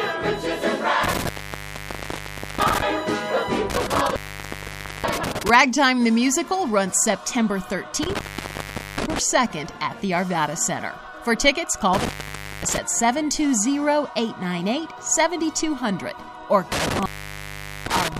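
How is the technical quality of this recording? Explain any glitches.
The recording is repeatedly interrupted. At 1.04 to 2.82 s, 3.70 to 5.50 s, 8.03 to 9.19 s, 11.94 to 12.78 s and 16.72 to 18.19 s, the sound crackles and drops to faint hiss for 0.5 to 1.3 s. This is intermittent contact, a loose cable or plug briefly opening the signal path.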